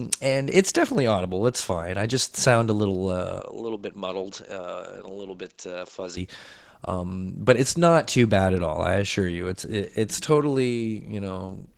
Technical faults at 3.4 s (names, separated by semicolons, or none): Opus voice compression; input switched to a poorer device